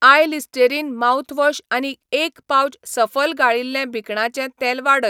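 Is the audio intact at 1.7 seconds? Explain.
Yes, at 1.7 seconds the speech plays through intact, with no audible dropout, click, distortion or other fault at that moment.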